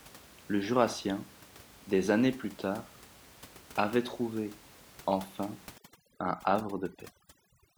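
From 5.78 s, right after "avait trouvé enfin", to the end at 7.77 s, the background drops and breaks up into twinkling specks: overdone noise removal, its reduction pulling individual frequency bands down whenever they approach the room noise level, about 23 dB below speech, and taking quiet vocal detail with them.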